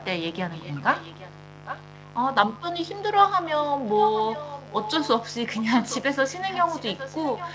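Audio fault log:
Throughout: mains buzz. A steady, raspy buzz sits under the speech the whole time, about 20 dB below it. It is built on 50 Hz. Sharp switching spikes come in twice per mains cycle, so the buzz is dense with harmonics. Those stack up into a rough, edgy tone rather than a smooth hum. The call path passes audio up to 8 kHz, so much of that harmonic rasp survives.
0.35–0.73 s, 0.93–1.34 s, 1.65–1.84 s, 3.19–3.24 s, 3.87–5.08 s, 5.55–6.12 s and 6.3 s to the end: echo leak. A second copy of the speech trails the original by 0.81 s. It sits about 20 dB down early on and about 10 to 15 dB down from 1.65 s onward. The likely cause is a far end playing the call on a loudspeaker, where the echo canceller missed part of what its microphone caught and sent it back. That is why it arrives in scraps and stretches.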